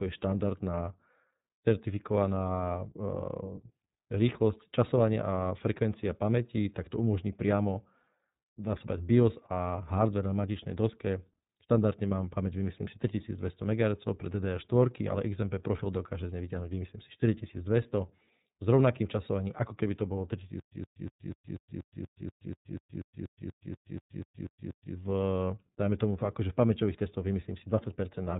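Across the whole speech clip the iLBC codec is plainly audible. Everything above 4 kHz is missing, and the voice has a rough, slightly synthetic grain. That points to iLBC's 30 ms frame, 13.33 kbps mode, with each frame coded on its own.

From 20.60 to 24.95 s comes a stutter with silent gaps. A 120 ms burst replays 18 times, each followed by about 122 ms of digital silence, at a steady 242 ms cycle. This is likely a stalled stream replaying its last fragment. Unlike a seamless loop, dead silence separates every repeat, and the speech in that span is lost.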